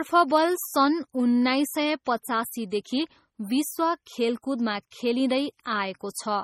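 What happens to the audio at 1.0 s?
At 1.0 s the speech carries heavy MP3 compression artefacts, present throughout: watery, swirly texture as weak frequency lines drop in and out, nothing above 16.1 kHz, likely from a starved encoder near 32 kbps.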